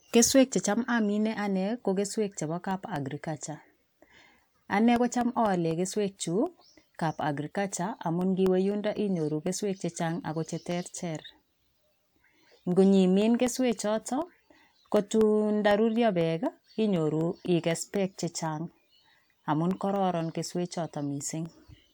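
From 2.71 s, just after "ane ko keswek chebo", through 21.70 s, there are periodic USB or driver dropouts: every 0.25 s something stalls the audio path and about half a millisecond drops to silence, giving a steady tick under the speech.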